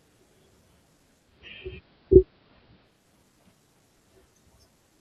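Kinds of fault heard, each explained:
Digital radio blending to analogue: the receiver lost the digital signal and cross-faded to AM, so the speech loses treble, shifts about 4 dB, and gains faint hiss.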